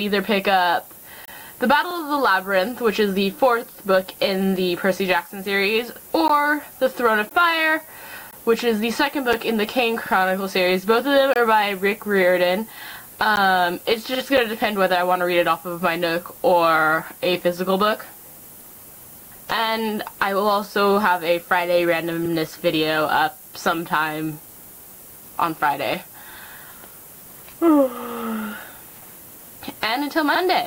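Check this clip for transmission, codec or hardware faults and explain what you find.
Three faults are present: low-bit-depth quantisation with noise shaping throughout, short silent gaps between stream segments, and one overlapping-chunk repeat.

Low bit depth with noise shaping runs through the whole clip. A steady, thin hiss sits only about 15 dB below the signal and climbs sharply toward the top of the band. The coarse rounding points to roughly a 7-bit signal. The quantisation error has been fed back and shaped upward, so it sits as a bright, high hiss rather than a flat one.

Gaps between stream segments appear at 1.25 to 1.28 s, 6.28, 7.29, 8.31, 9.33, 11.34 to 11.36, 13.36 and 14.37 s. They follow a one-second segment grid, with some beats skipped. Each is a hard-edged dropout to silence of about 6 to 26 ms. The segment time stamps leave a small gap, and the player fills it with silence. 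Nothing is lost, but each gap sounds like an abrupt hole.

Overlapping chunks cause one stutter at 5.96 to 6.01 s. About 50 ms of audio plays twice because the next chunk, on what fits a 4-second chunk length, begins before the previous one ended. At the join this is heard as a quick repeat with a click-like discontinuity.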